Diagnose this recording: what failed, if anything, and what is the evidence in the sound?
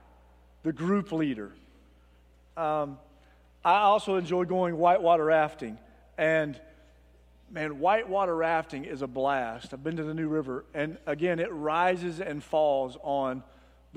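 A steady low tone at 60 Hz sits under the sound for the whole clip, roughly 30 dB below the signal, with some low harmonics above it. This is mains hum from the analogue wiring: a ground loop or nearby transformer is coupling the power line into the signal path.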